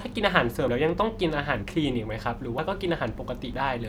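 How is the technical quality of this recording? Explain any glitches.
The recording has one recurring glitch: brief skips at 0.68 s, 2.59 s and 3.54 s. The likely cause is audio missing between chunks, with the processor working in roughly one-second blocks and dropping a short slice at each handover. Around a twentieth of a second of speech vanishes each time, and the two sides butt together, so the speech jumps abruptly forward.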